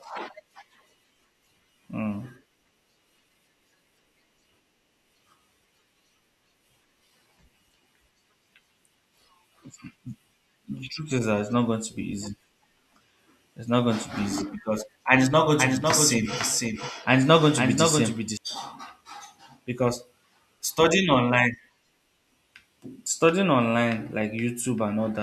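From 15.59 to 18.37 s, just after "and it's not going", there is a doubled audio track. A second full-band copy of the speech follows about half a second behind, somewhat quieter. It has no room decay. It starts and stops abruptly. A slower duplicate capture path is the likely cause.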